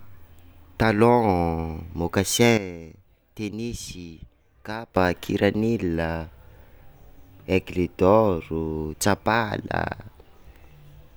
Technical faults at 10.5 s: none

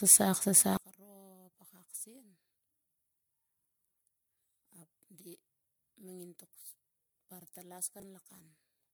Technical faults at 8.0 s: generation loss; one channel inverted; chunks out of order

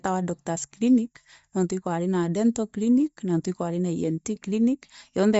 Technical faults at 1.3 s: Bluetooth LC3 compression

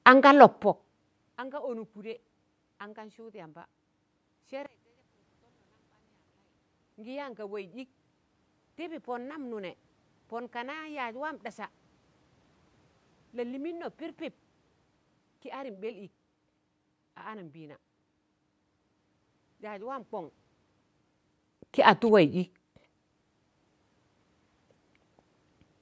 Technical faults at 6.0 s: one channel inverted

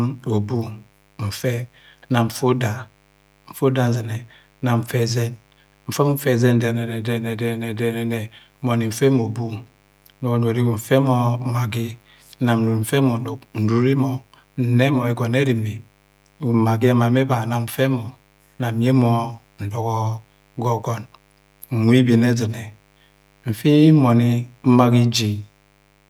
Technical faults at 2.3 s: mains buzz

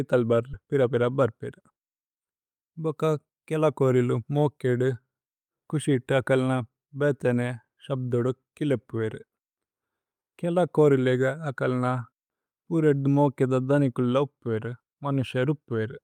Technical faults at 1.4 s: jitter buffer speed-up

